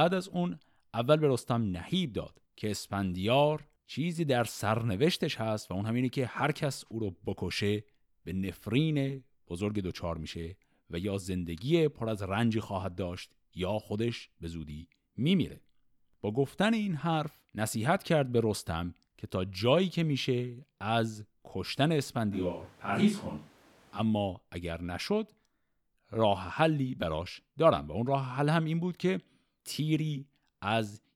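At 22.35 s the speech abruptly turns hollow, roomy and thin, at similar level, until 23.98 s. A switch to a distant microphone is the likely cause.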